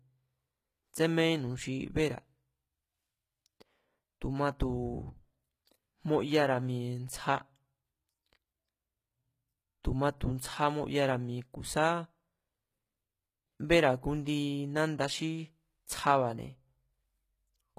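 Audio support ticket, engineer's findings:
Whole clip: speech treble bright but gritty, s sounds metallic and lispy, nothing above 14.9 kHz. Likely HE-AAC compression, treble rebuilt by band replication at a low bitrate near 20 kbps. Unlike a plain low-pass, the treble is present but harmonically misaligned.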